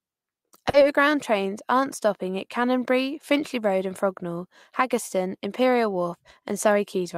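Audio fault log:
0.69–0.76 s, short concealed packet loss: about 40 ms of the speech arrived too late, so the decoder bridged the gap by carrying the last sound forward, leaving a quick smear before it blends back in.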